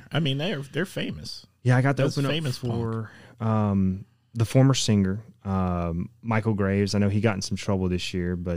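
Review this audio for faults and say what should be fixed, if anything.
Nothing stood out on listening, so there is nothing here that needs fixing.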